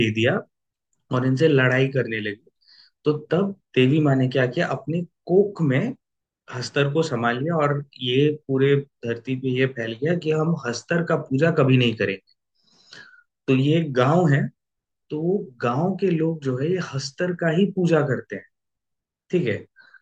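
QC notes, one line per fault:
No faults found.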